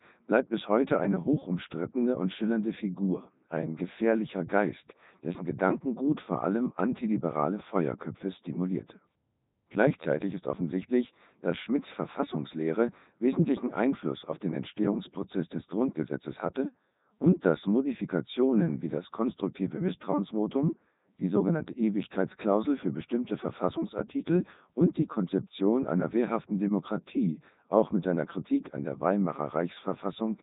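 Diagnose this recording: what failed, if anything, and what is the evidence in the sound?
The failure is at the codec stage: the whole speech recording has passed through the Codec 2 vocoder, and the damage is heavy. From start to finish the voice sounds robotic and buzzy, and nothing is present above 3.8 kHz, which fits Codec 2's top 3.2 kbit/s mode. Only pitch, voicing, energy and a coarse spectral envelope survive, and the decoder rebuilds the voice from sine waves. On a spectrogram this shows as unnaturally regular harmonic stripes under a hard ceiling at 3.8 kHz, while the waveform no longer follows the original's shape.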